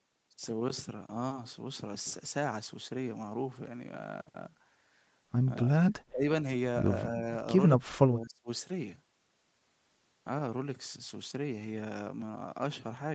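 Speech suppressed in double talk hits this speech recording from 5.9 to 6.23 s and again from 7.74 to 8.49 s. The voice drops by about 30 dB, most likely because an echo canceller could not separate the near-end talker from the loudspeaker echo of the far-end talk and turned both down. The audio's top end stops around 8 kHz, which fits an Opus call path.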